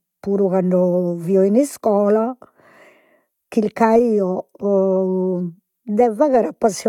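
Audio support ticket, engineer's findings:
Engineer's findings: no audio fault found in this speech recording, nothing to action on the ticket.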